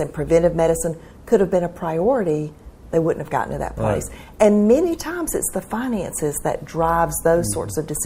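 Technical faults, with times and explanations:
No technical faults, with times or otherwise, can be heard in this clip.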